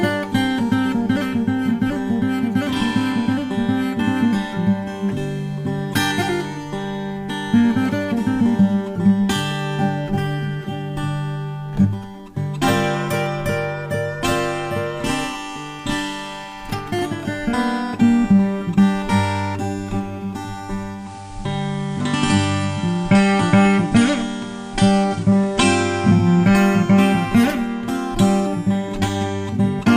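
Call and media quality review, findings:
Processor overload crackle, 16.43–17.20 s: gritty tearing from a run of tiny silent gaps, which fits buffers under a millisecond missing deadlines. Stops when the load clears, unlike a steady dropout.

Digital radio blending to analogue, 20.93–26.29 s: 194 ms cross-fade to FM. Hiss about 30 dB down, level shifts about 1 dB. The hiss separates it from codec band-limiting.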